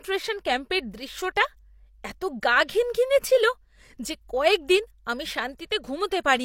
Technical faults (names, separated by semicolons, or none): pre-echo